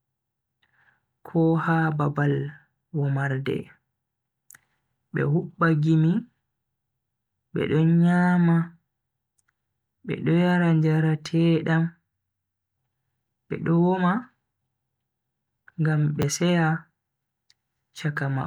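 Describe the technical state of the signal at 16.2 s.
A repeated buffer occurs at 16.22 s in the speech. Fresh audio failed to reach the output in time, so the device played its most recent block a second time. The repeated segment is very short, consistent with a 10 ms buffer, so instead of an audible stutter it comes across as a brief click or buzz with a hard join at the seam. Roughly 10 ms of the original sound is lost to the repeat.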